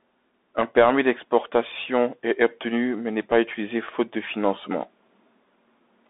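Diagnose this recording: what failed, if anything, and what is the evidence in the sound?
Narrow, boxy speech with a gritty, granular hiss under it for the whole clip, s sounds turning scratchy and nothing at all above about 3.8 kHz. Energy is confined to roughly 200 Hz to 3.7 kHz. The stage is the codec: a Bluetooth CVSD headset codec, consistent with a 64 kbps link. Its one-bit up-or-down coding with an adaptive step can't follow loud high-frequency content, so fricatives smear into slope-overload grit, and the step noise becomes that hiss.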